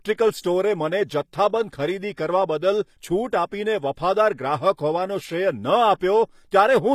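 Likely HE-AAC compression runs from start to finish, and its damage is plainly audible. The codec has kept only the lower spectrum and synthesised the treble by copying lower bands upward under a coarse envelope, which fits a low bitrate of around 24 kbps. The top end still reaches about 20.5 kHz, but its harmonics don't line up with those below, so s sounds come out gritty, metallic or lispy.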